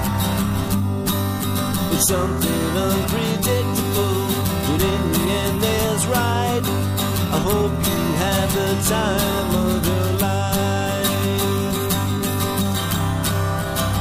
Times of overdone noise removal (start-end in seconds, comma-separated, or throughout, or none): none